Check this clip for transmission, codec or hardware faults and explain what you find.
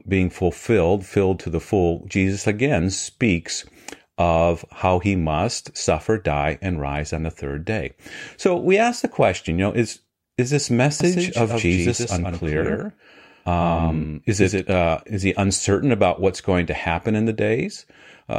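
One fault turns up in this speech. Doubled audio track, 11.00 to 14.72 s: a second full-band copy runs about 150 ms behind, roughly 5 dB quieter, likely captured again by a slower path and mixed in. It sounds like dry, uncoloured slapback that switches on and off abruptly.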